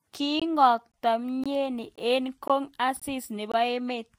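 At each join between half-second chunks there is a gap between chunks: 20 ms silences at 0.40–0.42, 0.92–0.94, 1.44–1.46, 1.96–1.98, 2.48–2.50, 3.00–3.02 and 3.52–3.54 s, chopping the speech rhythmically without losing any sound.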